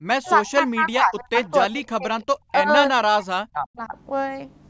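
From 0.14 to 1.39 s, again from 1.65 to 2.7 s, and from 2.89 to 3.95 s, the speech keeps sinking and breaking up in pieces, dropping by something like 40 dB at its worst, for about a second in the first and third stretches and a bit less in the middle one. That's the signature of speech suppressed in double talk, likely from an echo canceller that couldn't tell this talker from loudspeaker echo while both sides spoke, so it clamped down on everything.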